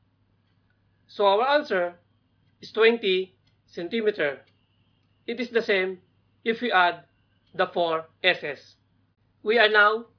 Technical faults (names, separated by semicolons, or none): none